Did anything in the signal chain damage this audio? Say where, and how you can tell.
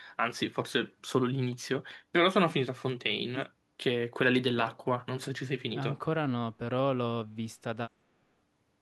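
No, nothing in this speech stood out on listening as damage from any stage of the signal chain.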